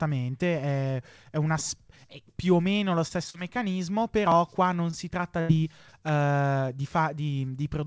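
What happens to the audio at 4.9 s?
At 4.90–4.96 s a short stall from a late packet holds the sound about 24 ms while the jitter buffer waits; unlike a dropout, nothing is lost.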